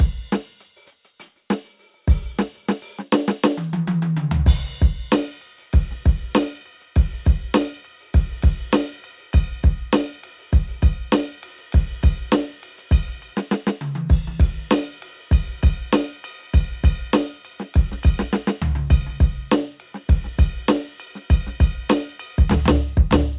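No faults to report: nothing in the music calls for attention at any point.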